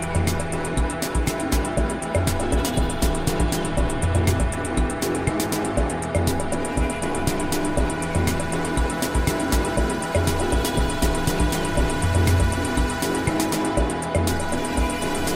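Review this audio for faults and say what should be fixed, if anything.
Nothing needs fixing: the signal holds steady throughout, with no dropouts, glitches or other disturbances to correct.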